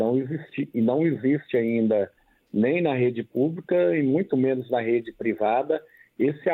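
No technical faults can be heard anywhere here.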